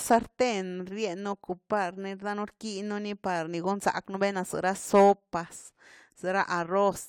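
Speech recording; no audible technical faults anywhere in the clip.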